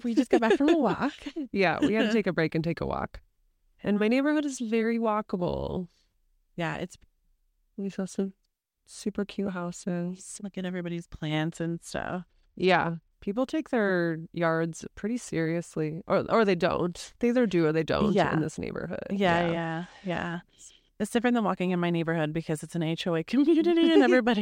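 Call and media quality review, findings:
Bluetooth SBC bit pool drop, 11.53–13.13 s (just after "at everybody's") and 19.26–20.35 s. Speech turns dull and gritty; upper sub-bands starved, remainder coarsely quantised. Fits link congestion forcing bit pool 28 down to 12, near 96 kbps, until recovery.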